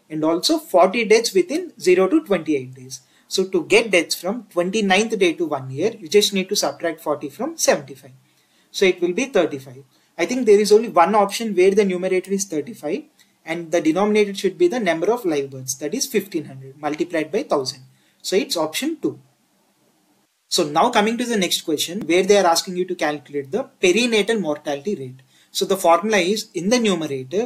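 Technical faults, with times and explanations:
Nothing stood out as a technical problem on listening.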